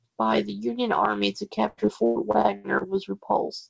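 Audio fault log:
1.68–2.85 s, repeated packet loss (robotic sound): seven separate holes open up in quick succession, the longest about 100 ms, and each is patched by stretching the last bit of sound, so about a third of this stretch is concealed filler with a choppy character. A single dropout would give one brief glitch. Broadband codec roughness would run steadily through the clip. Here the repetition is tightly clustered, while the band stays capped at 8 kHz, as a wideband call codec like G.722 would leave it.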